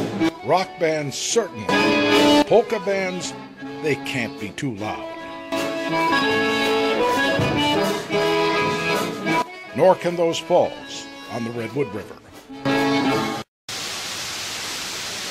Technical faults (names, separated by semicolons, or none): none